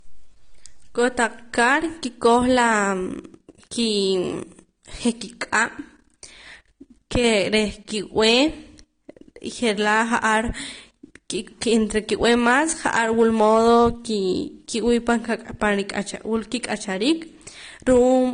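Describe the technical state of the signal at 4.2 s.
At 4.2 s, as across the whole recording, the speech has nothing above 9.7 kHz, with the smeared, swirly artefacts of heavy lossy coding. This is likely low-bitrate audio saved at a high bitrate: an earlier low-bitrate encode, which fits about 32 kbit/s AAC, discarded the detail, and a later high-rate MP3 merely preserved the damage. Unlike a simple low-pass filter, the band below the cut-off is also degraded, while the generous container bitrate adds hardly any artefacts of its own.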